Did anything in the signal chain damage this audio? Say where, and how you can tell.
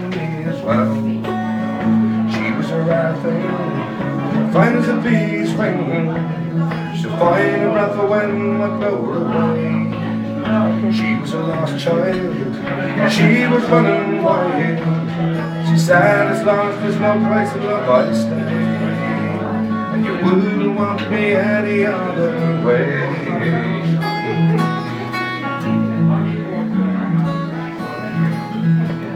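No, nothing in the signal chain damaged this audio.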